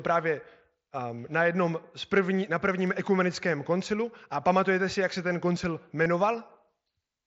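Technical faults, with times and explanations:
6.04 s, concealed Bluetooth headset packet loss: 15 ms of audio dropped, consistent with two lost headset frames, and the receiver patched the gap with a repeated stretch of recent waveform, so it sounds like a brief buzzy tone with a small warble where real audio returns.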